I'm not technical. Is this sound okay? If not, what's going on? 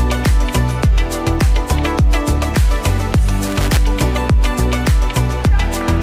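No, not quite. From about 3.46 to 3.77 seconds, roughly a third of a second, there's a short, uneven burst of crackling and scratching. That's loose connector crackle: somewhere in the chain, a plug or cable contact is worn or dirty, so when it shifts it keeps connecting and disconnecting many times in a fraction of a second. The sound gets chopped into bits.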